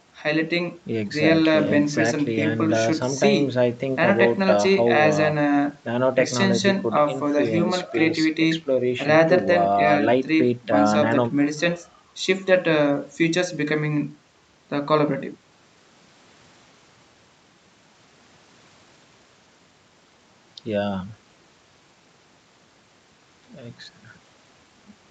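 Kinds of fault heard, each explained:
No kinds of fault are heard in this speech clip.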